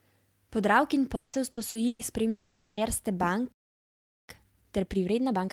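Repeated packet loss (robotic sound) runs from 1.15 to 2.02 s. Four separate holes open in the speech within this stretch, the longest 180 ms, and each is bridged by stretching out the last sound heard before it. Together the patches cover 420 ms, nearly half of the stretch, so the speech turns choppy and takes on a robotic edge, with pieces of it simply gone.

A long network dropout follows from 2.29 to 2.80 s. The speech breaks off, and for 480 ms the gap is filled with a continuation of the last sound that buzzes or hisses and thins out rather than dropping to silence. The cause is likely a run of audio that never reached the receiver, so that whole stretch of speech is lost and the speech resumes after it with the missing part skipped.

A playback stall comes next, from 3.52 to 4.29 s. The speech halts mid-flow and the output goes silent for about 0.77 s, a gap long enough to sound like a freeze. 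The likely cause is the player running dry of buffered data or its audio thread being held up, after which output restarts rather than anything being concealed.

Time-compressed catch-up takes over at 4.29 s and lasts to the end at 5.52 s. Having fallen behind during the stall, the player trims its backlog by dropping small slices of audio and cross-fading the joins, so the speech runs at 1.25 times normal speed. The pitch stays where it should be, but the delivery sounds rushed.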